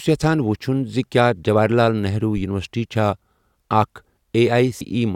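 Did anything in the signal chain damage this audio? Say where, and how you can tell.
Yes. A deep thump at 2.37 to 2.44 s dies away within about 15 ms: a phantom power thump in the analogue wiring, a supply step passing through the coupling capacitors.

A short blip at 4.80 s is damaged data in a compressed stream. Corrupted bytes made the decoder misread frames and lose sync before recovering.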